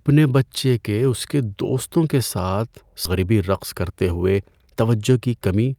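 A speech recording with a skip ahead at 3.05 s: roughly a second of audio is simply gone, and the two sides are butted together with no fill, so the waveform shows an abrupt splice and the spectrogram a sudden change in harmonic pattern with no gap. Shortly after, jitter buffer speed-up sets in, first from 3.19 to 3.41 s at 115% speed, trimming about 40 ms, then from 3.83 to 5.75 s at 111%, trimming around 200 ms. Short pitch-period chunks are cut repeatedly, so the speech sounds hurried while the pitch stays the same. On a spectrogram, the harmonic spacing stays constant while syllables and formant transitions look compressed in time.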